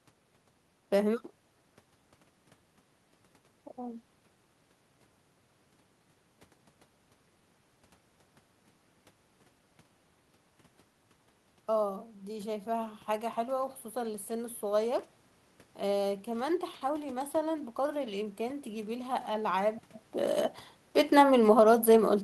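A speech recording in which the automatic gain control misjudges the level twice. From 11.83 to 14.64 s the automatic gain rising pushes gain up by about 4 dB, so the voice and the room noise behind it swell together. At 21.07 s an automatic gain falling begins as the control pulls gain back, and the voice and background sink together through to the end, unlike the level shifts near 7 s and 19.5 s, where only the voice changes as the talker moves.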